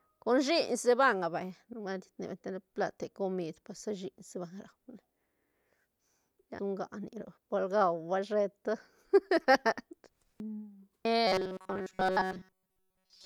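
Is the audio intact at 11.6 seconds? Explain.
No. From 11.27 to 13.26 s, robotic sound from repeated short buffers: audio likely arrives too seldom, so short chunks are replayed, imposing a rigid, metallic 188 Hz buzz.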